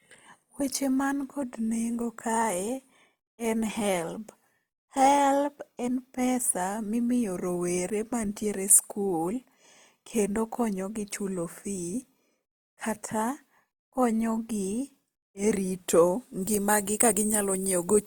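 Throughout the speech, the signal appears to have passed through a low-bitrate lossy encoder, most likely Opus compression in its music (CELT) mode, at a rate that points to roughly 24 kbps. With too few bits, the encoder keeps each band's overall energy but rebuilds the fine detail from folded lower bands and noise. The damage is plainly audible as a rough, grainy texture on the voice rather than swirling, while the bandwidth stays full and extends to about 20.1 kHz.

From 16.43 s to the end at 18.07 s, just after "e rito", pre-emphasis left on affects the sound. A treble boost meant to be undone on playback was never reversed. The tilt fits a 50-microsecond FM curve, leaving 10 kHz about 10 dB too strong relative to 1 kHz. For that last stretch the voice turns thin, bright and harsh, and sibilants hiss noticeably more than in the preceding audio.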